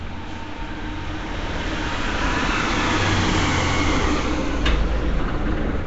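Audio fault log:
Throughout: Nellymoser compression. A block codec likely starved weak bands of bits and refilled them with noise, at a rate fitting about 32 kbps, so the sound carries a rough, hissy, smeared halo and nothing is heard above about 7.7 kHz.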